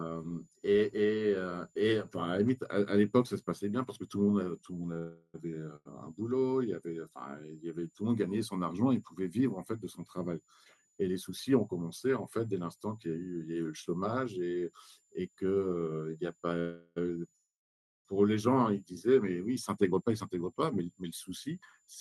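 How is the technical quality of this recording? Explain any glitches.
The recording has several network and power faults: a faint whistle throughout, a cluster of stalls and freezes around 5 s and 17 s, and two stretches where the audio is hurried.

The switching supply whistle runs for the whole clip. A switching power supply is running in an audible burst mode or beating against another supply. Its interference lands in the audio path as a thin high tone near 7 kHz, wandering between about 6.94 and 7.29 kHz. It sits faint, roughly 40 dB below the speech.

A short stall from a late packet occurs at 4.93 to 4.98 s and again at 5.76 to 5.87 s. Each time, a packet failed to arrive on schedule and the jitter buffer emptied. The receiver held the last sound for 24 ms and then 95 ms until the data turned up, then resumed at the same point. Nothing is lost, but the speech briefly hangs on one sound with a slight buzzy quality.

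A call audio freeze follows at 4.98 to 5.36 s, and two more occur at 16.60 to 16.98 s and 17.36 to 18.07 s. The likely cause is packets held up in transit, draining the jitter buffer for longer stretches. The receiver extends the last sound as a fading buzz: 361 ms, 365 ms and 689 ms of filler. The first dips into about 20 ms of silence, and the last goes quiet for about 550 ms before speech resumes.

A jitter buffer speed-up occurs at 11.08 to 11.87 s and 19.49 to 21.88 s. After delayed packets arrived in a bunch, the buffer held more audio than its target. The receiver trimmed it by cutting many small pitch-period slices, roughly 70 ms in the first stretch and about 200 ms in the second. The speech plays about 8% fast at unchanged pitch and sounds hurried.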